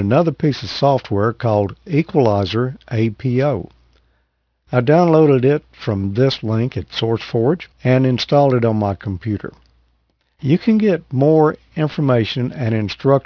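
Aliasing runs through the whole clip: the speech was resampled without a proper low-pass, which fits a drop to an 11 kHz rate, so content above 5.5 kHz folds back as faint, gritty, metallic sibilants. A spectrogram shows energy jammed against a hard 5.5 kHz ceiling, with mirrored ghost traces beneath it.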